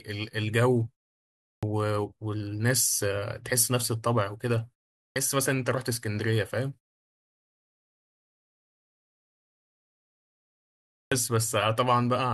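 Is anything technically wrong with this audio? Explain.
Yes. There is a clipped start after a pause at 1.55, 5.08 and 11.04 s. The output device sleeps during silence and wakes late, losing about 75 to 78 ms each time. Each waveform therefore jumps abruptly from flat silence straight into speech, with no gradual onset in the spectrogram.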